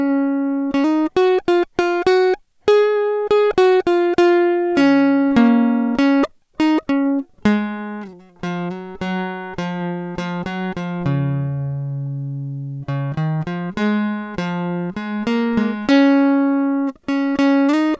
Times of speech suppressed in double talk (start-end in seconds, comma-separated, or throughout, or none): none